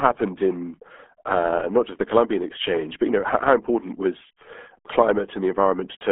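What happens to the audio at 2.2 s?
At 2.2 s, as throughout the clip, the RealAudio 14.4 codec is at work: heavy low-bitrate coding, consistent with 8 kbit/s, leaves muffled, gargly speech with nothing above 3.7 kHz.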